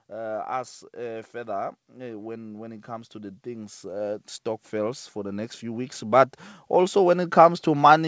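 Automatic gain rising runs from 0.11 s to the end: the gain control judged the input too quiet and pushed it up steadily, so voice and background swell together.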